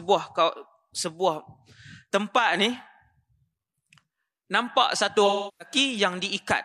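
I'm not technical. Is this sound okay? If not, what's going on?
No. From 5.26 to 5.75 s there is AAC frame loss with concealment: a chunk of audio went missing, and the player patched it with a smeared, blurry guess instead of leaving an abrupt silent gap.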